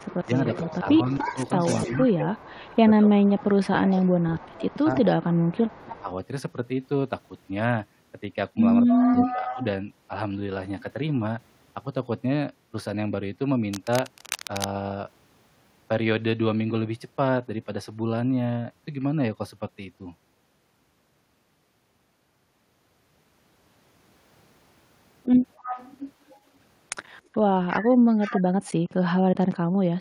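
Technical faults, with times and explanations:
0.0–5.87 s, 8.88–9.64 s, 25.57–26.38 s, 27.7–28.72 s, echo leak: a copy of the speech returns 294 ms late, about 10 to 20 dB below it, likely from incomplete echo cancellation on a loudspeaker end.
0.26–2.54 s, 3.09–6.1 s, 9.04–9.61 s, 28.05–28.38 s, speech suppressed in double talk: while the far side plays on the loudspeaker, the talker dips about 15 to 30 dB in short patches, likely the canceller turning both down.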